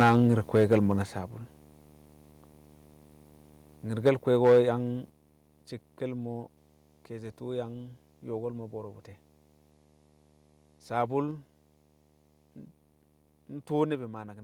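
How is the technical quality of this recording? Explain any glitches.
The recording has three technical problems: a continuous display buzz, two bursts of clipping, and three sudden drops in level.

Video or display buzz runs through the whole clip. A screen or video cable is coupling into the audio path and adds a buzz at the 75 Hz field rate with hash above it. It sits roughly 30 dB below the speech.

Microphone overload occurs from 0.0 to 0.75 s and from 4.45 to 4.59 s. The input gain was likely set too high, so the peaks ran into the converter's ceiling, by about 9 dB and then about 5 dB. Their flattened tops give the loudest syllables a harsh, crackling edge. Around 7% of samples are clipped in the first stretch and about a fifth in the second.

The microphone volume is stepped down at 0.03 s by about 2 dB, then at 1.02 s and 5.1 s by about 6 dB each. The call software likely reacted to the clipping by lowering the device's input gain in single steps, so the speech and the background drop in level together and abruptly.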